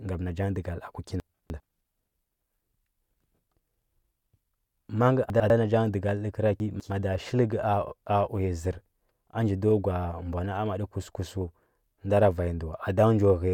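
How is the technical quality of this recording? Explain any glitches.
The speech is marred by three chunks out of order, where 100 ms blocks were delivered late and replayed after their successors. At 1.2 to 1.6 s one block lands three chunks late. At 5.3 to 5.5 s, just after "ma ngə", one lands a single chunk late. At 6.6 to 6.9 s one lands two chunks late. Each produces a brief jumbled stretch with hard joins.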